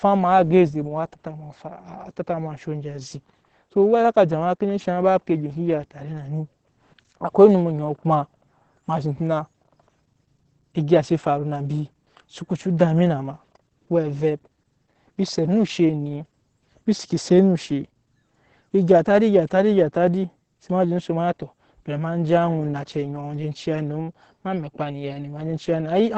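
Opus voice compression runs through the whole clip, with the heavy damage typical of a very low bitrate, which points to roughly 10 kbps. The linear-prediction (SILK) coder models the vocal tract and spends few bits on the excitation signal, so the speech comes out muffled, hoarse and faintly robotic. The band is held to wideband, and nothing is left above about 8.9 kHz, which takes the air and crispness out of the consonants.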